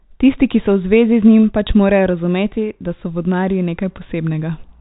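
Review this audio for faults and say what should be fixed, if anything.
Nothing in this speech audio needs to be fixed; no faults turn up on review.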